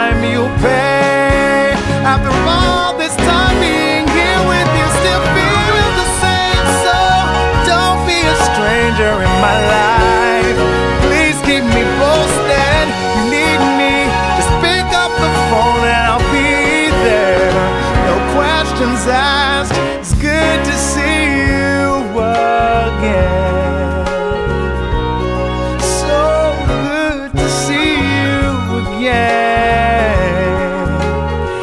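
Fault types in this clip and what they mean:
No faults can be heard anywhere in this recording.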